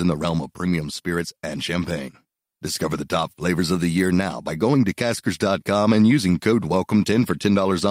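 No technical faults are audible.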